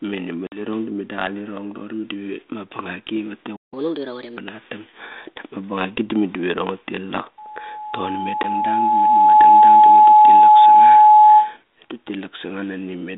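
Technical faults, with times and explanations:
0.47–0.61 s, packet loss on an ADPCM call: a hard-edged gap of about 50 ms, likely several lost packets, then the ADPCM decoder's predictor resynchronises, leaving brief distortion.
3.56–3.74 s, playback stall: the speech halts abruptly for about 160 ms of silence, likely because the player ran out of buffered data before resuming.
3.74–4.37 s, catch-up at higher speed: the backlog is resampled at 1.25× speed, so speech runs fast and about four semitones high before returning to normal.
7.38–11.57 s, loudspeaker feedback squeal: an 853 Hz tone swells over roughly two seconds to about 15 dB above the speech, as the microphone–loudspeaker loop exceeds unity gain.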